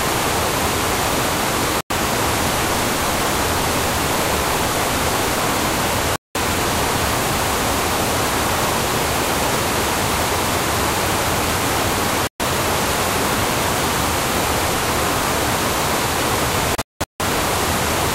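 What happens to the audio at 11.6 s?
Nothing goes wrong at 11.6 s; the sound carries straight through that moment without any audible fault.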